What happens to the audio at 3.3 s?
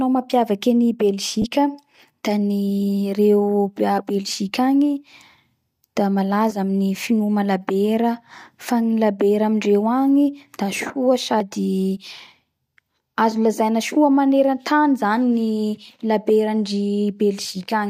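Nothing goes wrong at 3.3 s: the speech carries on intact there, with only the light, even coloration that likely comes from Bluetooth LC3 compression.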